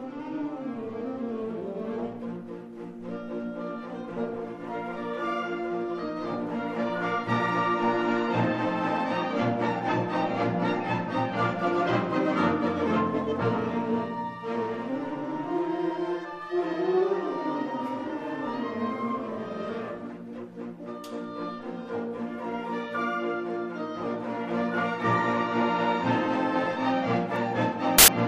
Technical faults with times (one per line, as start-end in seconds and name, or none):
27.98-28.08 file tags played as audio